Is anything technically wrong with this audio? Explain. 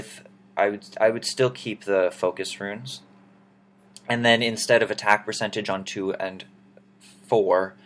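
No, nothing is technically wrong with this audio.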